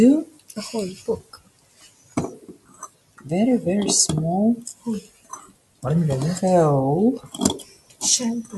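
Throughout, a speech-tuned noise suppressor applied to music or sounds turns level up and down by around 20 dB, so the waveform envelope pumps and the spectrogram thins between onsets. Sound cut by the noise suppressor dips about 16 dB at 0.25–0.57, 0.95–2.17, 2.36–3.26 and 4.74–5.84 s, and about 14 dB at 7.63–8.02 s, showing as darkened, hollowed stretches.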